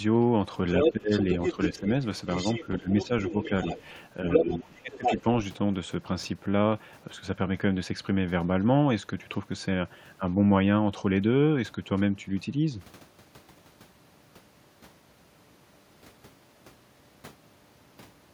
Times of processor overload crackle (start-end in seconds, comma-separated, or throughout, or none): none